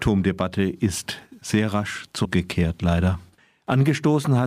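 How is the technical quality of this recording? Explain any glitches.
The recording has one glitch, caused by damaged data in a compressed stream. From 2.21 to 2.25 s, right after "ist sehr rasch", the decoder hits corrupted bytes, misreads those frames and resynchronises. The result is a brief break in the audio. On a spectrogram this appears as a short, broadband smear; in the waveform, a sudden discontinuity.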